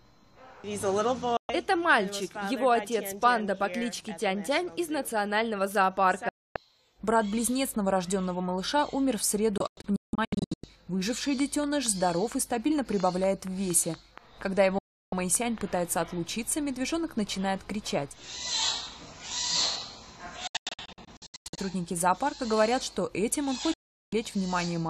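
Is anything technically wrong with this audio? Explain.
Yes. The sound snaps to silence within about 3 ms and returns moments later at 1.37 to 1.50 s, 6.29 to 6.56 s, 14.78 to 15.13 s and 23.74 to 24.13 s. At 9.58 to 10.64 s and 20.47 to 21.58 s it breaks into clusters of short holes totalling about 0.62 s each. This is a digital broadcast dropout: the receiver muted while corrupted frames, which fit 24 ms frames, were discarded, so that audio is gone.

From 11.40 to 16.03 s there is a steady ticking at about 4.3 clicks per second, around twenty in all, peaking a little above the sound. This train of clicks is likely interference from nearby equipment injecting regular pulses.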